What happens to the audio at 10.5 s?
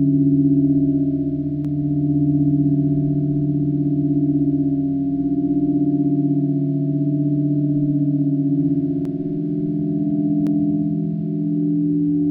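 At 10.47 s there is a single sharp click, and the likely cause is dropped samples: a fraction of a millisecond of the stream goes missing, so the waveform jumps straight from one value to a later one instead of moving smoothly between them. The gap is far too short to remove any of the sound itself. On a waveform it shows as a sudden step. On a spectrogram it appears as one thin vertical line running across the frequency range.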